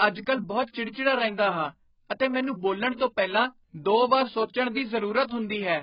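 Likely heavy AAC compression at a very low bitrate throughout strips everything above 5.1 kHz, leaving the speech dull and smeared with a warbling, fizzy texture.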